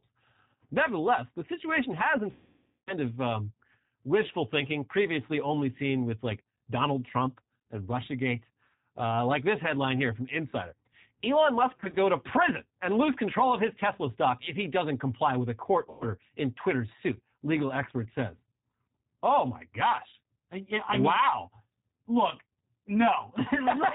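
A speech recording carrying G.729 codec damage throughout: the rough, slightly synthetic texture fits an 8 kbit/s G.729A stream rebuilding the voice from a filter, a pitch predictor and a few pulses. On a spectrogram, energy stops flat at 4 kHz, with nothing above. VoIP packet loss concealed by the speech codec appears three times. From 2.32 to 2.93 s, about 550 ms of audio is missing, and the decoder stretches the last sound into a buzzy tone or coloured noise that fades. From 11.72 to 11.98 s, about 100 ms is lost in short gaps of up to 20 ms spread over 240 ms. From 15.90 to 16.05 s, about 110 ms is lost. On a spectrogram these stretches show smeared, repeating harmonics that dim gradually, and the waveform shrinks into a smooth, periodic decay instead of dropping to silence.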